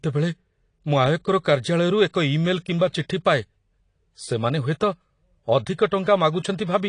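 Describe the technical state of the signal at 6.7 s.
At 6.7 s the speech carries AAC compression damage that runs through the whole clip. Nothing sounds above 10.2 kHz, and the sibilants have a fizzy, warbling smear. This is likely a low-bitrate AAC-LC encoder, consistent with about 32 kbps, dropping the top band and coarsely quantising frequency lines frame by frame. On a spectrogram the energy stops at a flat ceiling near 10.2 kHz.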